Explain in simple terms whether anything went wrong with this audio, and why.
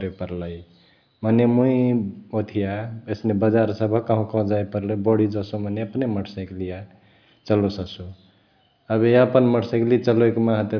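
Nothing went wrong here: the speech recording comes through as a steady, intact signal, with no technical fault to point to at any moment.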